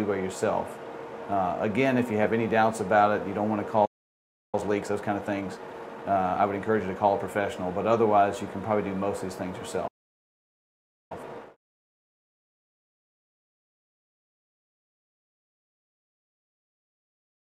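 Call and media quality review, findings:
Playback stall, 3.85 to 4.55 s. Audio cuts out mid-flow, silent for about 0.68 s, then resumes. Player-side starvation, likely an empty jitter buffer or a blocked audio thread. Output has nothing to render until data arrives.

Playback stall, 9.87 to 11.12 s. Same symptom, longer gap of about 1.23 s. Likely the same component and mechanism. Deeper starvation before recovery.

Time-compressed catch-up, 4.55 to 7.55 s. Follows first stall. Audio hurried at 1.15x, pitch unchanged. Player trims backlog by cutting and cross-fading short segments.

Time-compressed catch-up, 11.12 to 13.56 s. Follows second stall. Stronger rush at 1.5x. Larger backlog drained by the same splicing.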